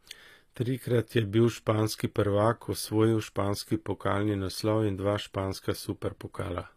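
Throughout, likely HE-AAC compression near 24 kbps rebuilds the treble from copied lower bands: sibilants sound gritty, and nothing remains above 14.9 kHz.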